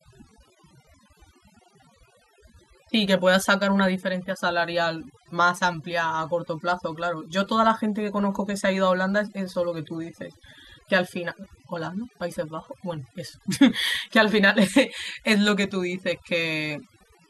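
From start to finish the background between phrases drops to near silence sprinkled with twinkling specks. This is overdone noise removal: the reduction was set so aggressively that it gates individual frequency bands near the noise level, stripping away quieter parts of the voice along with the noise.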